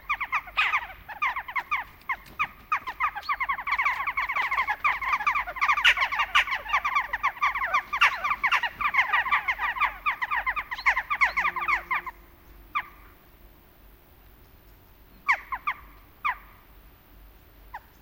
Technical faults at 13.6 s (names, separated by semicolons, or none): none